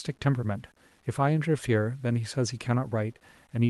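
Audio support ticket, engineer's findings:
Grainy, signal-following grit across the whole speech clip, roughest on quiet tails; likely low bit depth without dither, sounds like 8-bit truncation, error sitting roughly 35 dB down.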